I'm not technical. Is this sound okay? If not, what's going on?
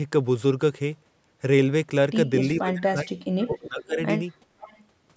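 No. From 2.57 to 3.99 s the voice sinks very deep, most likely speech suppressed in double talk: both sides spoke at once, and the call's echo control turned this talker down along with the loudspeaker sound for about a second and a half.

There is also a faint delayed copy of the voice, trailing roughly half a second behind, at 3.41 to 3.84 s, briefly at 4.3 s, and again at 4.6 to 4.82 s. This is likely an echo leak, where a loudspeaker's sound got past the echo canceller and came back.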